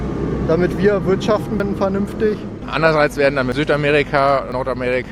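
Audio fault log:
1.6 s, 3.52 s, 4.52 s: dropped buffer (overrun). Each is a jump where the sound skips ahead with no silence, losing about a tenth of a second at 1.6 s and about 40 ms at the others. The hardware likely overwrote samples before the program collected them, so the surrounding audio is joined directly.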